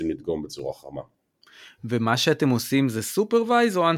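From 0.35 to 1.58 s the speech carries CD scratch ticks: six brief clicks, roughly five per second, where a blemish on each disc turn defeated error correction and the player patched the samples. A spectrogram shows thin vertical broadband lines; the waveform shows tiny glitches, each only a few milliseconds long.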